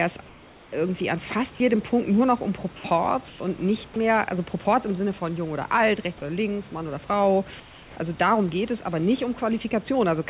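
From 0.26 to 0.72 s the room background, about 27 dB below the loud parts, gives way to comfort noise in place of the background: a smooth, featureless hiss about 2 dB quieter. This is likely discontinuous transmission, with the receiver synthesising noise in the pause. The same swap recurs at 2.76–2.84 s with no level change, at 3.28–3.40 s about 7 dB quieter, and at 7.60–7.96 s about 3 dB quieter. Only background is replaced, and no speech goes missing.

At 1.56–1.60 s, 3.94 s and 6.18–6.22 s, about 20 ms of speech is itself cut and filled with steady noise. This is sound dropped by the voice detector, likely because the sender's voice detector took the sound for background. What sets these apart is that audible speech is clipped.

Throughout the clip nothing reaches above 4 kHz, which fits a G.711 call path.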